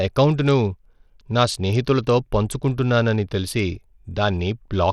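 From start to finish the speech has a gritty, grainy edge, with the treble thinning out and flickering in and out. That's likely Bluetooth SBC compression starved of bits, which fits something around 80 kbps, where the top sub-bands drop out and coarse quantisation adds that rough aliasing.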